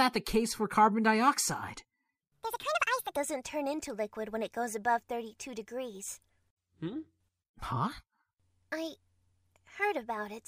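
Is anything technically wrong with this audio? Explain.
Yes. From 2.21 to 3.17 s there is a section at the wrong speed, likely from being played against the wrong clock: 1.59 times too fast, so the sound turns hurried and about seven semitones higher.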